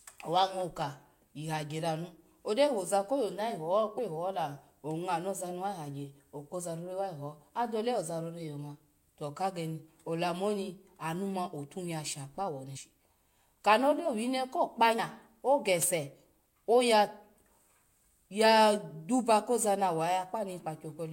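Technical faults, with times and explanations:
3.97 s, 12.75 to 12.77 s and 14.98 s: damaged data in a compressed stream, three brief blips, the first just before "hihola ongma naza ni" and the last just after "ko kpa". At each point some bytes of the encoded stream are wrong, so the decoder misreads or rejects a frame, loses its place and hunts for the next valid frame header. That garbled stretch of around 20 ms or less comes out as a short glitch.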